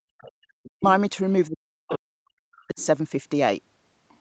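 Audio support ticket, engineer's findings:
Background gated by the echo canceller, 0.00 to 0.43 s: room sound pumps down by about 32 dB during loudspeaker playback, roughly 0.3 s in all, then recovers. On a spectrogram the noise floor vanishes abruptly and returns. On the waveform the low-level floor drops sharply. Component: echo canceller's suppressor clamping the mic.

Other side's voice leaking through, at 0.18 to 0.32 s, 0.63 to 0.70 s, 1.90 to 1.98 s, 2.73 to 2.86 s and 4.09 to 4.17 s: faint second voice, about 20 to 35 dB below the talker. Likely residual echo the canceller failed to subtract. On a spectrogram there are weak, broken harmonic streaks under or between the main speech.

Speech suppressed in double talk, 0.71 to 0.83 s and 1.48 to 2.78 s: talker's voice dips sharply, by as much as 40 dB, roughly a second in total. Likely the canceller confusing near speech with echo while both sides talk. 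On the waveform the envelope is chopped. On a spectrogram the harmonics are notched out. Audio is band-limited at 8 kHz, consistent with Opus at 32 kbps.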